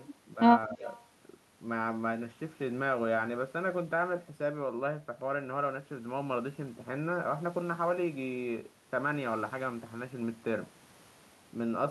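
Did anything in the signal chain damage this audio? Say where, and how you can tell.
Yes. In call processing, the echo canceller likely confused double talk with echo, pulling the speech down by roughly 15 dB from 0.67 to 0.86 s.

An echo leak, likely from residual loudspeaker pickup, returns a faint copy delayed by 222 ms, about 35 dB below the speech, from 0.97 to 1.04 s.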